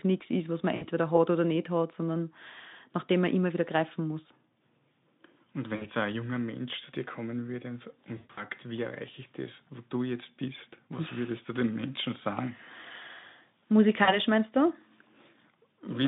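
At 0.75, 5.75, 8.17 and 14.03 s, VoIP packet loss concealed by the speech codec breaks the narrowband Speex line. Each gap is filled by extrapolating the last pitch and filter, so speech smears into a buzzy tone or coloured noise that fades, for about 60 ms (roughly three 20 ms frames), 60 ms, 180 ms scattered over 200 ms, and 40 ms. On a spectrogram, frozen, decaying energy sits below 3.7 kHz. The waveform shows a shrinking, overly regular envelope.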